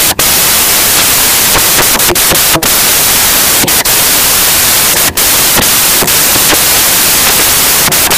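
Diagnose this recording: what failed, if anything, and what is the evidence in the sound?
The failure is at the sample-format conversion stage: samples built from the wrong bytes, for the whole clip. The speech is buried under loud, harsh broadband noise from start to finish. The reader assembles each sample's bytes wrongly, through a one-byte offset, swapped byte order or a misjudged alignment. The rapidly changing low bits end up carrying most of each value, so detail turns into noise.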